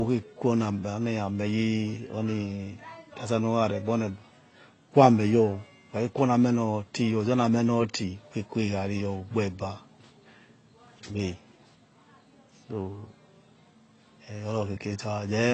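From start to finish, the speech carries plainly audible AAC compression damage. Nothing is left above about 8.3 kHz, so it sounds dull. Sibilants turn fizzy and smeared, and sustained sounds warble. A low-bitrate AAC-LC encode, around 24 kbps, is the likely cause.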